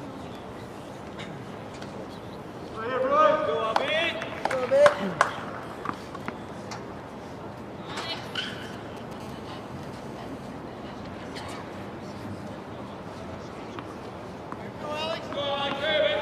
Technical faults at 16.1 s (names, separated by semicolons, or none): none